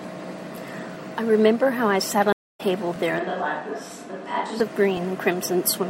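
A brief stutter-click at 0.95 s recurs at 2.96 s and 4.97 s, roughly every 2 seconds. These are overlapping chunks: the audio was handled in 2-second blocks, each starting 12 ms before the previous one ended, so that sliver plays twice at every join.

At 2.33 s the speech cuts out for 185 ms, then returns at 2.61 s about a tenth of a second further on, with that stretch lost. This is a stream reconnect: the connection dropped, and the player restarted its decoder mid-stream, skipping ahead.

From 3.19 s to 4.60 s the speech turns abruptly hollow and roomy, with thinner bass, a level drop of around 5 dB, and background noise rising to roughly 30 dB below the speech. Both changes are sudden. The likely cause is a switch to a distant microphone, after the close one failed or was dropped.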